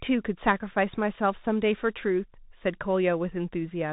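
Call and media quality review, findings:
Bluetooth CVSD headset codec, whole clip. Speech band capped near 4 kHz, s sounds scratchy, gritty hiss riding under the voice, plainly audible throughout. Probable component: headset link, which fits a 64 kbps CVSD path. Mechanism: one-bit up/down delta coding with an adaptive step. Sharp, loud high content outruns the step and breaks up, and the constant stepping leaves grain in the background.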